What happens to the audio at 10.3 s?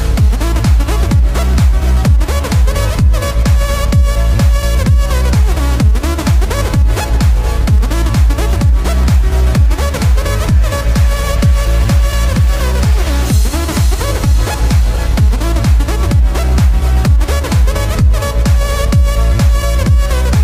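Nothing goes wrong at 10.3 s: the audio plays through that moment intact, with no dropout, click, glitch or other fault.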